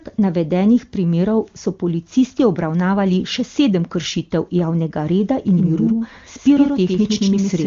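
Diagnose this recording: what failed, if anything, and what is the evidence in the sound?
A doubled audio track starts at 5.51 s, right after "sedem kršitev javnega reda", and runs to the end. A second full-band copy of the speech sits roughly a tenth of a second behind the original, about 5 dB quieter. It enters abruptly and carries no decay or room colour, so it is not an echo. The likely cause is a second, slower capture path or an edit that stacks two copies out of step. The AMR-WB encoding passes both copies cleanly.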